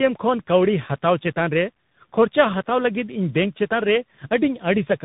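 Tandem speech coding runs throughout the speech. It was decoded and re-encoded at each network border, with two separate speech coders in series, which fits a low-rate AMR-NB stage followed by CVSD. Nothing reaches above 3.8 kHz. Unlike a single codec, the second coder's slurred, hissy roughness is layered over the first one's warble.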